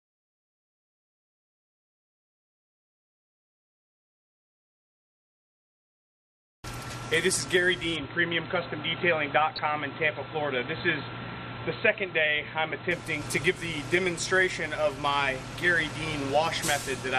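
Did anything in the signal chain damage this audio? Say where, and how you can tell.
Yes. The codec stage left its mark across the whole clip: it sounds dull and gurgly, with upper bands flickering in and out, which is likely MP2 compression at a low rate, in the region of 80 kbps. The damage is plainly audible throughout.

At the capture end, the input switched to a poorer device from 7.96 to 12.91 s. The sound goes dull, with nothing above about 4.1 kHz, and a new noise floor sits about 55 dB below the signal. There's no gap and no level jump, so it's likely a device or profile change.

Over the transmission path there's a short DAB burbling event at 9.56 to 9.59 s. It's a quick burst where corrupted bits got past error correction into three MP2 frames. It fits a low bit error rate.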